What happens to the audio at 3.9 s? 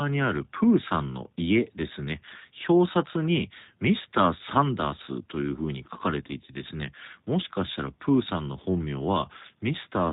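The speech at 3.9 s, like the whole clip, has been squeezed through the G.729 codec at 8 kbit/s, with nothing above 4 kHz kept, leaving it band-limited, rough and plainly synthetic.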